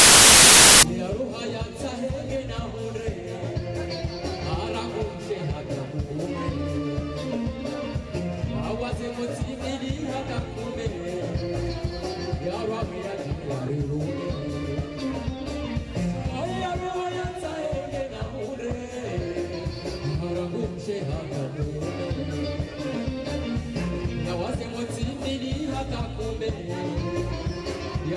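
File tags played as audio occupy the opening 0.83 seconds, from 0.0 to 0.83 s. A metadata block holding an embedded cover picture has been read by the decoder as though it were sample data. Because image data is already compressed and close to random, it comes out as very loud white noise: a loud burst of hiss with hard, abrupt edges at both start and finish, ending sharply where the actual audio begins.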